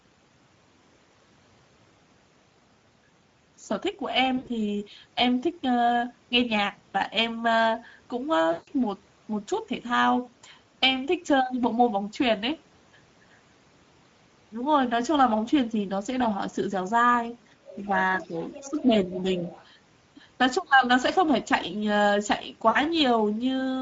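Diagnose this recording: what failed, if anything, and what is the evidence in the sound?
Codec stage: the whole clip carries plainly audible Speex codec damage. The speech is hoarse and noisy, which fits a Speex mode of about 16.8 kbps. On a spectrogram the harmonics look smeared and grainy, and the band above 4 kHz is a diffuse noise-like fill with no clear structure.

Network stage: there are three spells of VoIP packet loss concealed by the speech codec, at 4.37–4.56 s, 8.51–8.70 s and 22.69–22.78 s. The decoder stretches the last pitch and filter into a fading buzz. The loss points to roughly 80, 160 and 60 ms of missing audio. On a waveform the envelope decays smoothly in each gap, and a spectrogram shows flat, repeated harmonic bands.

Call processing: the other side's voice leaks through as faint scraps at 17.69–17.88, 18.20–18.84, 19.15–19.21 and 19.37–19.66 s. They sit about 15 to 20 dB below the talker. 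This is likely residual loudspeaker echo that the echo canceller missed. On a spectrogram it shows as weak, overlapping harmonic traces under the main voice.

Call processing: speech is suppressed in double talk at 18.19–18.34 s and 18.68–19.36 s, overlapping the leaked voice. The talker dips by a few dB at first, then by about 10 dB. This is likely the echo canceller attenuating both voices at once. The waveform envelope sags visibly.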